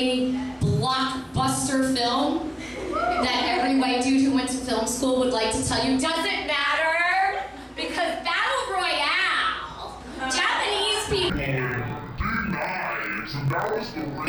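Interleaved audio read as planar from 11.30 s to the end: alternating left-right samples split into halves, which fits 1024-sample blocks, dropping the sound an octave, doubled and choppy at 43.1 Hz.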